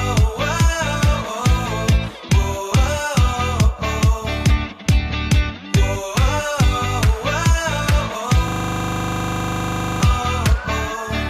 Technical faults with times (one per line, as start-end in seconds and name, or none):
8.48-10.02 system hang loop